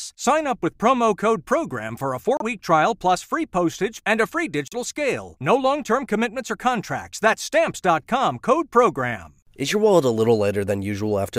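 A likely Bluetooth stall emptied the playback buffer twice, leaving 32 ms of silence at 2.37 s after "for a" and 39 ms at 4.68 s after "postage and a free".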